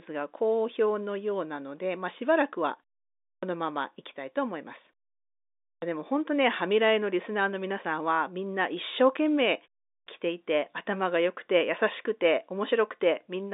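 The output device drops into sleep during pauses and needs time to wake again, so in this speech clip each restart after silence comes out as a clipped start after a pause, with roughly 70 to 77 ms swallowed at 3.35 s, 5.75 s and 10.0 s. Words there jump abruptly out of silence, missing their opening sounds, over a telephone band of about 250 Hz to 3.7 kHz.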